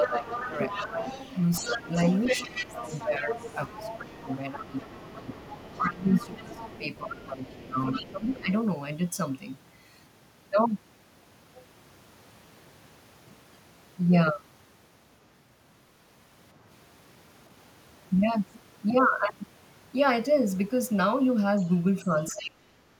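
From 0.0 to 1.06 s, 1.61 to 1.89 s and 2.47 to 8.51 s the speech is suppressed in double talk. The talker's level dips by roughly 10 dB, then by about 15 dB across some four seconds of the last stretch, likely because the echo canceller turned everything down while both sides spoke. The main voice sags.

Overlapping this, from 0.04 to 8.34 s and again from 21.58 to 22.44 s, the other side's voice is leaking through. It is a separate voice, likely loudspeaker echo left behind by the canceller, running around 10 dB and then 15 dB below the talker.

From 22.02 to 22.83 s the speech suppression returns and is deepest, at about 25 dB.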